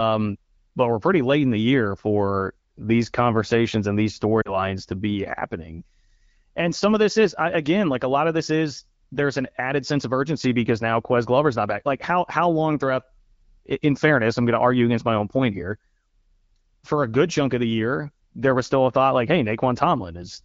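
Lost AMR speech frames at 4.41 to 4.57 s, after "these conversations and these": the decoder repeated its last good settings with falling gain, dropping the sound to near silence before "to be happening".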